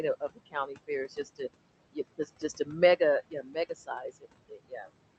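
From the first moment, the background noise drops away in the gaps and swells back up under the speech. These are noise suppressor artifacts: the suppressor pulls down, frame by frame, every band it judges to be steady noise, here by about 21 dB. It is fighting room noise sitting only about 15 dB below the speech.

The same suppressor also bites into the speech. Between 0.2 and 0.9 s, sounds go faint and swallowed, with the deepest dip about 20 dB and around a third of a second affected in total. Shorter losses follow at 1.09 to 1.41 s (about 15 dB, roughly a tenth of a second) and 2.18 to 2.69 s (about 12 dB, around 150 ms). The longest stretch runs from 3.3 to 4.26 s (about 16 dB, about 400 ms), and a final one from 4.49 to 4.9 s drops about 19 dB over roughly 200 ms. In each case the speech cut by the noise suppressor was soft consonants, endings or quieter passages that it mistook for background and turned down along with it. 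All of this rides on a call path whose top end stops at 8 kHz, with coding grain consistent with Opus running at around 32 kbps.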